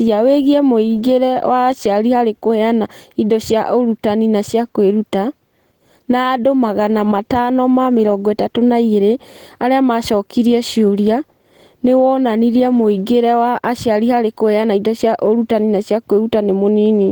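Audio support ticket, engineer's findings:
Opus compression, throughout. Speech hoarse and grainy, codec damage plainly audible. Band energy kept with few spectral holes, but fine detail refilled with noise. Likely the encoder's hybrid speech mode at a low rate, consistent with 16 kbps. Bandwidth intact up to 20.1 kHz.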